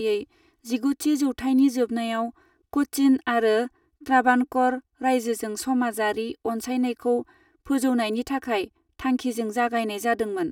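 Across the whole speech clip there is a channel delay causing comb filtering. One channel arrives roughly 3 ms behind the other, and when the two are summed to mono, the components they share cancel at regularly spaced frequencies, the first near 200 Hz. The speech sounds hollow and phasey, thinned in the low body. A spectrogram shows evenly spaced dark horizontal notches that stay fixed for the full duration.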